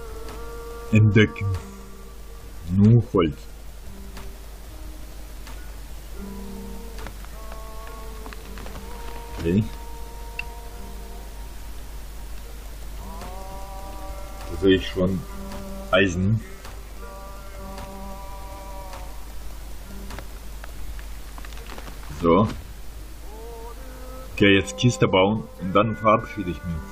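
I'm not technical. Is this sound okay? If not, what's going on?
Yes, no faults heard.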